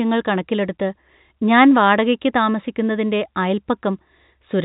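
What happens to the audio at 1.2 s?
Nothing goes wrong at 1.2 s: the speech there is intact, carried through the same band-limited telephone coding as the rest of the clip, with no break, click or distortion at that point.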